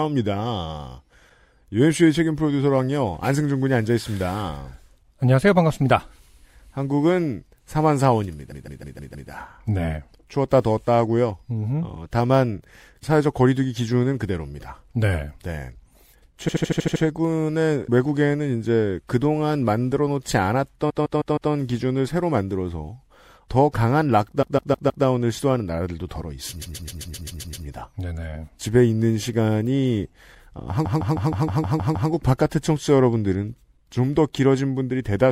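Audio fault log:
8.51–9.29 s, 16.47–17.02 s, 20.89–21.51 s, 24.41–25.04 s, 26.61–27.65 s, 30.84–32.09 s: repeated frames. The speech stutters, looping a 78–157 ms block four to eight times. A run of compressed frames, likely about 26 ms each, was replayed, adding 0.5–1.3 s each time.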